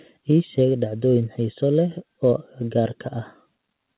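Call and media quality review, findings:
No faults found in this call audio.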